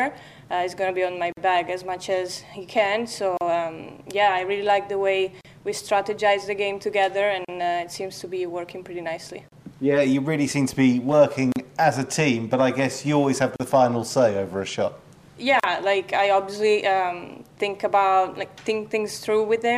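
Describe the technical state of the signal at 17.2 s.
At 17.2 s the signal is intact, with no audible technical fault at that moment.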